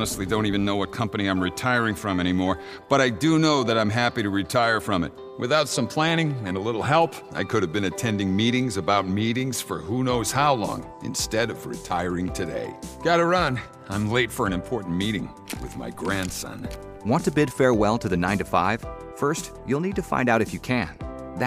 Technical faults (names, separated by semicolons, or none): none